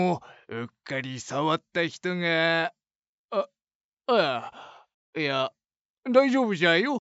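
Nothing here gives me anything to flag; I can't hear any technical fault anywhere in the clip.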